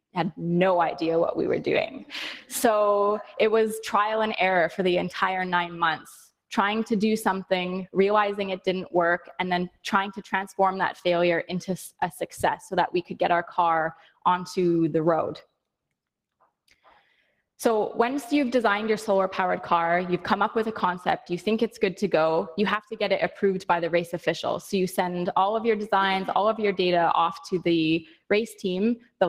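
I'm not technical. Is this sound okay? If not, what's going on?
No. A noise suppressor applied to music or sounds runs through the whole clip. A filter built for speech keeps treating steady, held and fading parts of the sound as background noise, so the level gently pumps up and down and the sound feels thinner.

On top of that, there's sound cut by the noise suppressor at 1.96, 9.19, 9.69, 13.94, 15.41, 16.68, 28.04 and 28.99 seconds. Each time, for a fraction of a second, the filter pushes a lingering sound down hard, so it suddenly dips or its tail vanishes early.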